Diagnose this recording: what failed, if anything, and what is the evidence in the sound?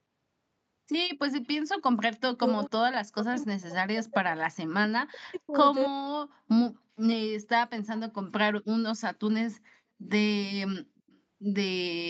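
Stage: call processing, in the echo canceller. The speech drops by as much as about 40 dB at 1.99–2.59 s, 3.08–4.36 s, 4.87–5.58 s and 5.86–6.01 s. The likely cause is speech suppressed in double talk. Both sides spoke at once, and the canceller ducked both its own talker and the loudspeaker echo.

Stage: call processing again. Faint delayed copies of the speech appear at 2.65–2.69 s, 5.35–5.39 s and 10.97–11.19 s. They sit about 35 to 40 dB down and trail the original by 265 ms. This is likely an echo leak. A loudspeaker's echo got past the canceller and was sent back.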